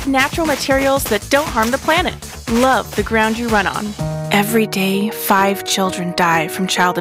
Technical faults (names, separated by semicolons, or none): hard clipping